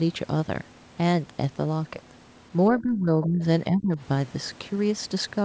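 From 2.79 to 3.43 s the speech is pulled down by roughly 20 dB. This is speech suppressed in double talk, likely the echo canceller ducking the talker while the far side also spoke. Within that stretch, from 3.22 to 3.26 s, a faint scrap of the other side's voice leaks through, about 20 dB below the speech, likely residual loudspeaker echo the canceller missed. From 3.68 to 3.99 s the same double-talk suppression returns, dipping the speech by roughly 20 dB again. Throughout, the audio stops at 8 kHz, which fits a wideband call codec such as G.722.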